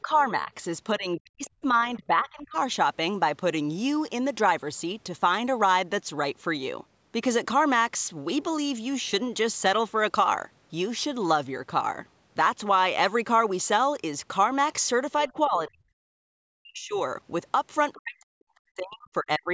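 From 0.02 to 0.51 s, and again from 0.98 to 2.56 s, 15.27 to 16.99 s and 17.97 to 19.5 s, the talker's level sinks. This is speech suppressed in double talk. The first dip is mild, roughly 10 dB, and the later ones fall roughly 40 dB. The likely cause is an echo canceller that could not separate the talker from loudspeaker echo while both sides spoke, so it turned everything down. Unlike a network dropout, the level ducks and recovers unevenly rather than stopping cleanly.

At 1.45–1.49 s and 17.93–17.97 s, the other side's voice leaks through as brief scraps, faint at roughly 25 to 30 dB below the talker. The likely cause is loudspeaker pickup the canceller failed to remove. Unlike room reverb, these are a separate voice, not a smeared tail of the talker.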